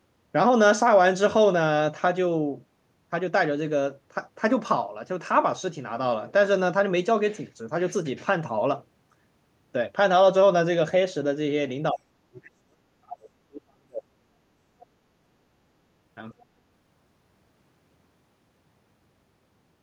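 At 11.92 s the speech is suppressed in double talk. For about a fifth of a second the talker drops by roughly 35 dB. The echo canceller likely mistook overlapping speech for echo and turned it down. At 12.33 s the other side's voice leaks through as a brief scrap, roughly 25 dB below the speech, likely echo the canceller missed. From 12.36 to 14.86 s the talker is suppressed again, dipping by around 40 dB for about two seconds, likely double talk once more. At 16.32 s a faint scrap of the other side leaks through, roughly 35 dB down, likely residual echo.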